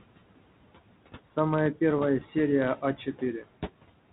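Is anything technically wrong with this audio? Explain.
Yes. Three kinds of fault can be heard in this speech clip.

Noise suppressor artifacts run through the whole clip. A suppressor is deciding, frame by frame, which frequency bands hold steady noise and pulling them down by about 18 dB. The room noise, which sits roughly 15 dB below the speech, therefore sinks in the pauses and swells back under each phrase.

Bit errors on an ADPCM link cause a short pop at 0.35 s and a rougher burst from 1.97 to 2.02 s. The coding sounds like G.726 at 32 kbit/s, as a DECT cordless phone would use, with only light codec roughness. A few bits arrive flipped, at a rate of a small fraction of a percent. Because each flipped bit also throws off the decoder's step size and prediction, the damage rings on for some milliseconds, with a brief lurch in level.

Speech cut by the noise suppressor occurs between 2.76 and 3.22 s. 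The suppressor mistakes quieter parts of the speech for background and turns them down along with the noise, by up to about 14 dB. Only around a tenth of a second in total is affected. Those softer sounds come out swallowed and faint.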